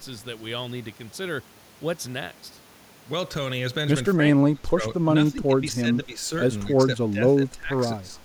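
Speech suppressed in double talk hits this speech recording at 4.14–4.83, 5.31–6.22, 6.64–6.89, 7.1–7.75 and 7.97–8.19 s. The voice dips in pieces, by up to roughly 25 dB at its deepest. The likely cause is an echo canceller turning everything down while both sides talked.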